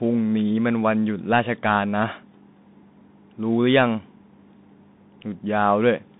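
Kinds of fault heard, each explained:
Bluetooth CVSD headset codec: the speech has been squeezed through a one-bit delta coder, which signals only up or down at each sample and adapts its step size, fitting a 64 kbps stream. A spectrogram shows a narrow band of about 150 Hz to 3.7 kHz with a hard ceiling and nothing above 3.8 kHz. Loud s sounds outrun the step and turn scratchy, a granular hiss sits underneath, and the waveform shows slope-limited, stepped edges.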